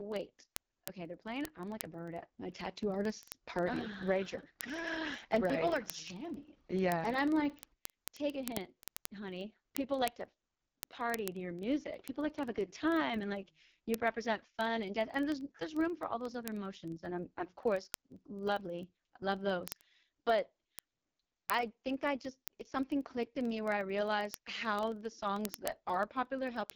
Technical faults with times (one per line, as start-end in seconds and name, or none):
0.00-26.76 AMR wideband (HD Voice) codec
0.12-26.74 word clock ticks